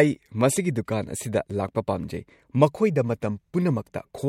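Nothing goes wrong anywhere in this short bit of speech, so there's no technical fault to point out.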